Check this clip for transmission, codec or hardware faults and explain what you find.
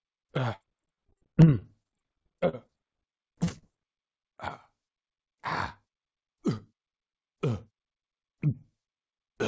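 Two kinds of transmission fault are audible, both from packet loss on a call path. The band stops at 8 kHz, which fits a wideband codec such as G.722 at 64 kbps.

From 0.56 to 2.70 s there is repeated packet loss (robotic sound). Packets kept arriving lost or late, about twenty holes with the longest near 43 ms. Each was patched by extending the preceding sound. With roughly a quarter of the stretch synthetic, the audio turns choppy and robotic, with fragments missing.

Short concealed packet loss occurs at 3.44 to 3.49 s, 3.49 to 3.52 s and 3.58 to 3.73 s. Between 20 and 40 ms failed to reach the decoder each time. The receiver bridged each hole by continuing the last sound before blending back, and the final patch filled about 35 ms of its 40 ms gap. These come through as brief smears or wobbles, and any short transient there can disappear.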